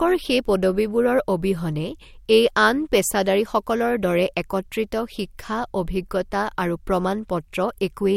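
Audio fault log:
throughout, periodic clock jitter: interference wobbles the converter clock at around 100 Hz, adding sidebands either side of every component, giving the speech a rough metallic edge.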